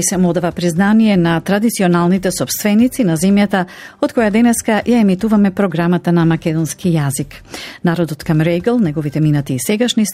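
No faults are audible anywhere in the recording.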